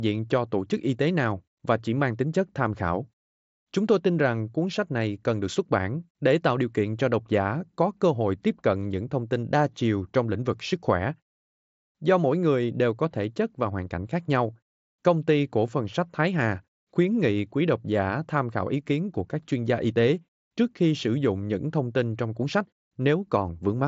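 Nothing faulty to flag in this speech, which comes over the Bluetooth mSBC headset path with its band ending near 7.7 kHz, as that wideband link sets it.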